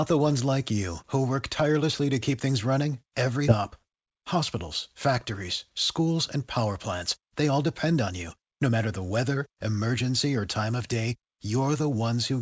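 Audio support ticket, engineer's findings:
Skip ahead at 3.48 s, right after "to keep things running". Playback jumps forward with no gap and nothing filled in. Roughly a second of audio is gone. Jitter buffer likely overflowed and discarded queued audio, stitching both sides nearly directly. Latency drops by about the same amount. The cut is abrupt, through G.722-band audio that carries nothing above 8 kHz.

Jitter buffer speed-up, three runs: 3.74–4.56 s at 106%, 5.99–6.65 s at 107%, 7.19–8.79 s at 108%, the last ending just before "the weather". Pitch unchanged, pace hurried. Buffer held excess audio. Receiver trimmed repeated pitch-period slices to shed delay. Removed roughly 50 ms in each of the first two runs and about 150 ms in the third.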